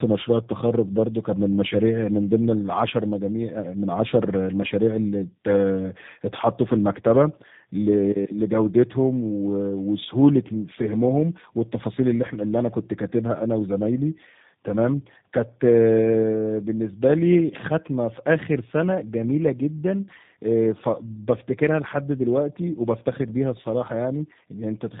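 Throughout, tandem speech coding: the call passed through two speech codecs in succession, decoded and re-encoded at the border, which fits AMR-NB followed by G.729A. The second coder compounds the first's damage, leaving speech rough, muffled and warbly, with nothing above 3.8 kHz.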